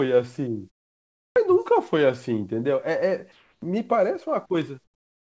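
A speech recording over a call path whose content stops at 8 kHz; in the pauses at 0.70–1.36 s, 3.32–3.62 s and 4.84–5.33 s, comfort noise replaces the background. The spectrogram shows flat, featureless hiss where the real background was, about 16 dB louder in the first gap, unchanged in the second and about 14 dB quieter in the last, likely from discontinuous transmission.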